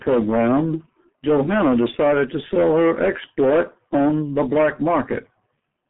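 G.723.1 codec damage runs through the whole speech clip: nothing reaches above 3.8 kHz, with the band squeezed to roughly 150 Hz to 3.4 kHz. The heavy coarseness fits a 6.3 kbit/s rate, where slowly updated 30 ms frames leave speech muffled, hoarse and smeared at the consonants.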